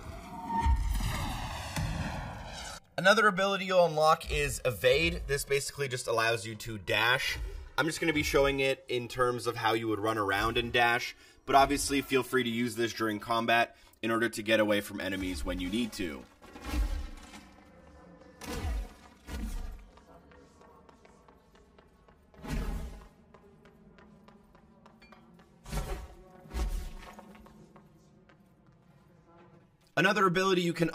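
Right from the start and all the way through, the two channels drift apart. They sound like they came from separately clocked devices about 150 ppm off, so the offset creeps up to roughly 7 ms by the end. Fold it to mono and you get that slow, sweeping flange.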